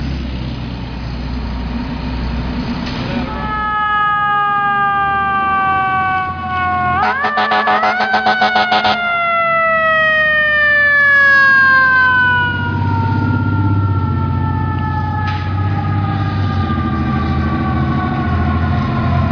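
No technical faults detected at any point in the recording.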